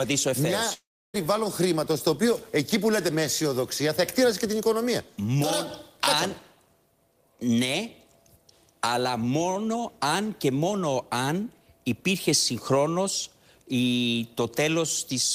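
Right near the start, from about 0.73 to 1.15 s, the sound cuts out for roughly 0.4 s, which is most likely a long network dropout. The receiver stretches the last bit of audio into a short fading buzz for the first tenth of a second or so. That leaves about 0.3 s of near silence before the sound picks up again further along, so whatever fell in that gap is simply gone.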